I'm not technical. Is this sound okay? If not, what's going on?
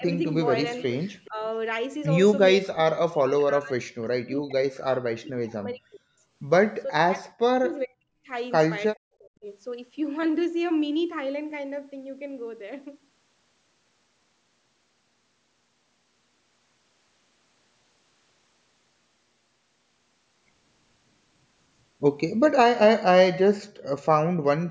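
No. The voice keeps dipping or vanishing in pieces: briefly at 0 to 0.06 s and 1.28 to 1.39 s, then heavily from 2.62 to 6.07 s, 6.83 to 7.29 s, 7.47 to 8.3 s and 8.96 to 9.46 s. This is speech suppressed in double talk, likely because both people spoke at once and the call's echo canceller turned everything down.

From 0.79 to 1.48 s a faint, delayed copy of the voice trails about 0.42 s behind. This is an echo leak: likely someone's loudspeaker sound reached their microphone and the echo canceller didn't fully remove it.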